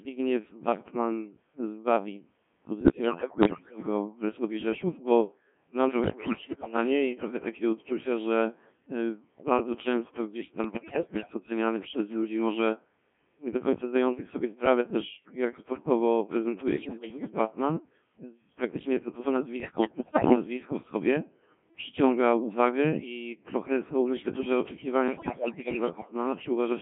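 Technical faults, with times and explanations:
Throughout: Codec 2 vocoder. The speech comes through a very low-rate digital-radio vocoder at 1.3 kbit/s with a 150 Hz to 3.4 kHz line band, and the damage is heavy. Only pitch, voicing, energy and a coarse spectral envelope are sent, and the decoder rebuilds the voice from sine waves, so it sounds robotic and buzzy. A spectrogram shows neat, evenly spaced harmonic stripes with no noise texture between them, cut off above 3.4 kHz. The waveform is smooth and synthetic and no longer matches the original shape.
2.80–3.83 s, 6.04–6.76 s, 10.64–11.34 s, 16.68–17.30 s, 19.60–20.36 s, 25.08–26.14 s: bit errors on digital voice radio. These six bursts last from about 0.6 to 1.05 s, and roughly one bit in ten flips in the first and roughly one in seven in the rest. Each bad bit corrupts the pitch, level, voicing or envelope of a whole frame, so the voice lurches into bleeps, warbles and robotic gibberish. 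The spectrogram's harmonic stripes jump up and down abruptly from frame to frame, and the waveform envelope steps in loudness.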